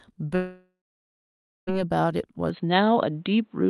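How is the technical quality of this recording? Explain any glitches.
The quality is patchy, with two clear problems in this speech.

From 0.35 to 1.70 s there's most likely a long network dropout. About 1.3 s of audio never arrived, so the receiver stretched the last sound into a fading buzz or hiss and then left roughly 0.9 s of near silence.

At 2.50 s, through to the end, the sound suddenly turns dull, with nothing above 4.2 kHz. That's likely the input switched to a poorer device, with no gap, the same level, and new noise well below the speech.

Before the switch, the call path keeps the highs up to about 12 kHz, which fits Opus at 48 kbps.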